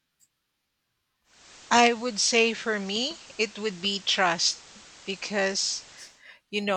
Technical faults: digital radio blending to analogue

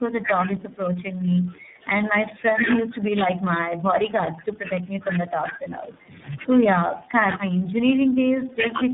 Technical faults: tandem speech coding; speech suppressed in double talk

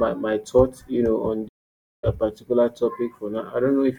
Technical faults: playback stall

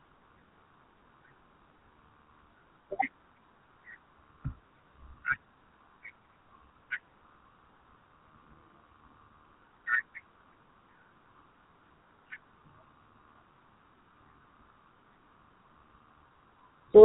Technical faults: GSM full-rate codec

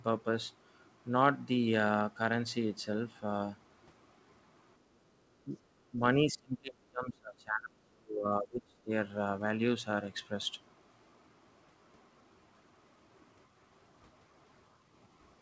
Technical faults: speech suppressed in double talk

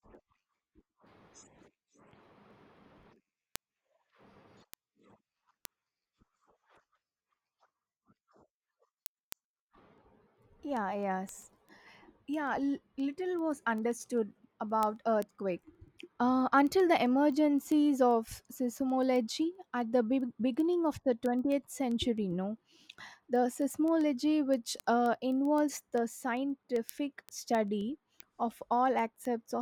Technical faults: word clock ticks

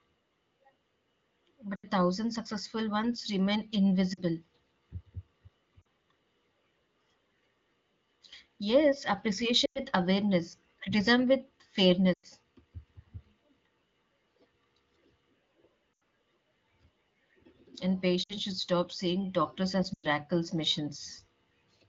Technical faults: lost AMR speech frames

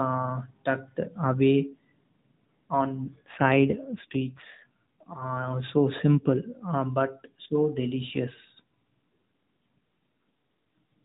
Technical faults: AMR rate drop

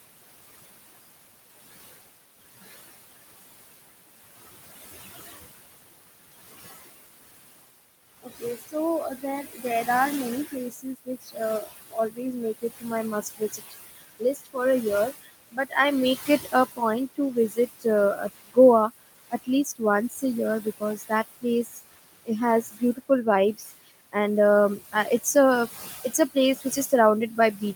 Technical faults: noise suppressor artifacts; speech cut by the noise suppressor

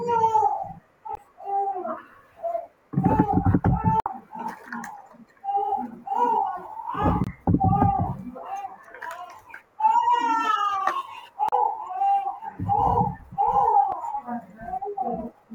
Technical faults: damaged data in a compressed stream

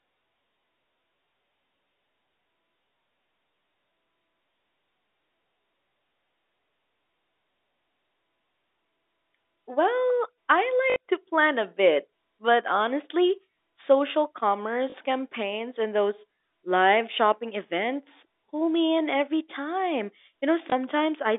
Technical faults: packet loss with last packet repeated

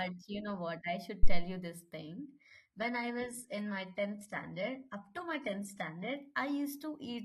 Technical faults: phantom power thump; adaptive stream at a lower bitrate

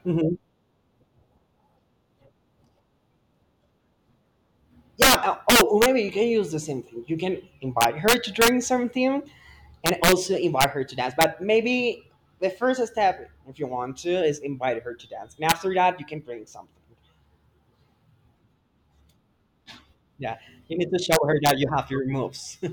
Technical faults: integer overflow

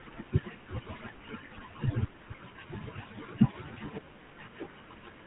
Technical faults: GSM full-rate codec

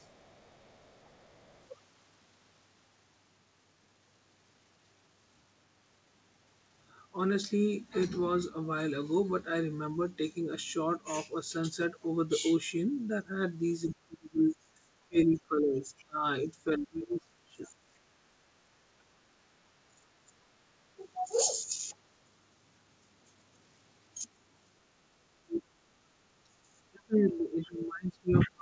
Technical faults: speech suppressed in double talk; other side's voice leaking through; background gated by the echo canceller

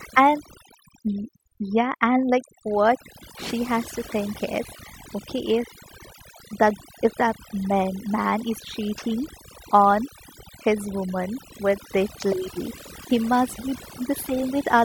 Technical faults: overdone noise removal

